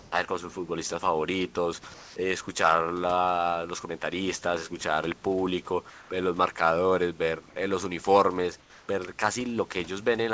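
At 1.94–2.16 s, 5.90–6.10 s and 8.60–8.88 s, comfort noise replaces the background, likely from discontinuous transmission. The pauses become steady, featureless hiss, up to about 4 dB quieter, showing as smooth, uniform spectrogram bands.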